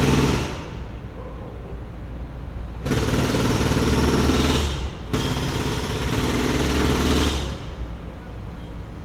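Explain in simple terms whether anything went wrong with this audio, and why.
Nothing went wrong with this audio that a careful listener would pick out. There are no dropouts, glitches or sudden changes anywhere in the clip, so there is nothing to point to and no time to give.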